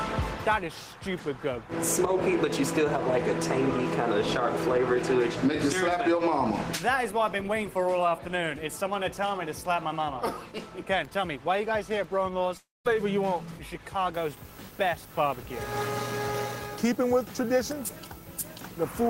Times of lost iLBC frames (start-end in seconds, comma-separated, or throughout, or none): none